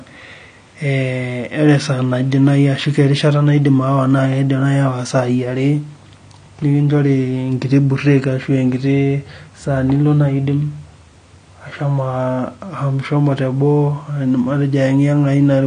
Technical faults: AAC compression

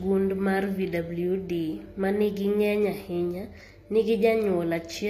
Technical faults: HE-AAC compression

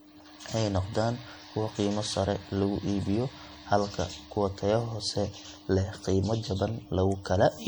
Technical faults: generation loss

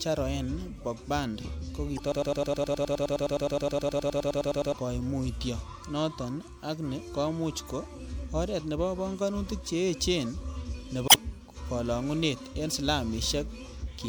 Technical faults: damaged data in a compressed stream; broken-record loop

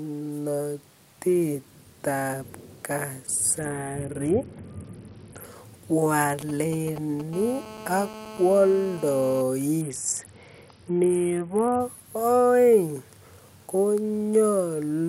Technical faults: Bluetooth SBC bit pool drop; GSM signalling bursts; GSM phone buzz

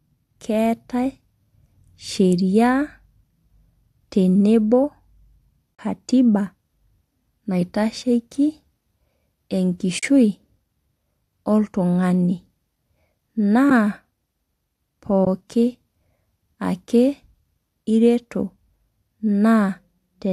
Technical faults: AAC frame loss with muting

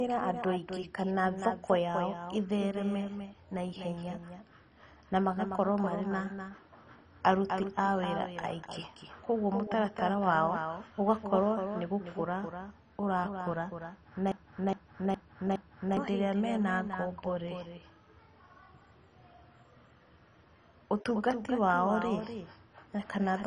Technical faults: doubled audio track; MP2 compression; broken-record loop

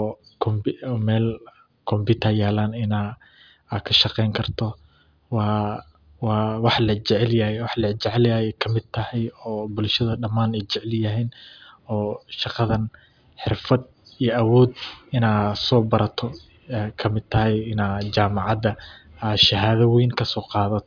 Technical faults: none

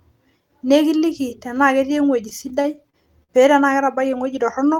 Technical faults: repeated stalls (stutter)

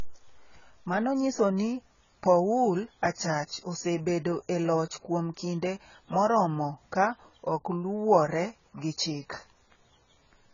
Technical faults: low-bitrate audio saved at a high bitrate

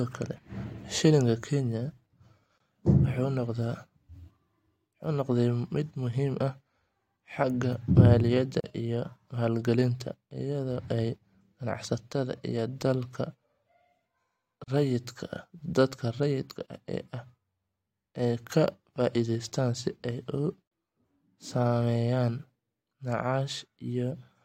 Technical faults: gap at a join of encoded pieces

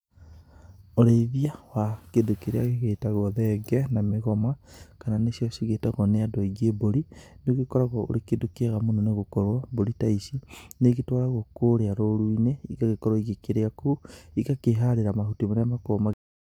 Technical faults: cut-off end

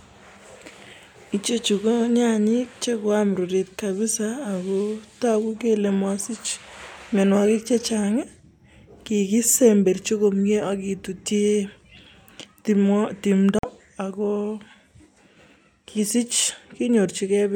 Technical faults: Bluetooth stall

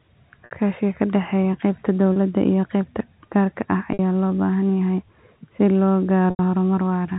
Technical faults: packet loss with pitch repetition

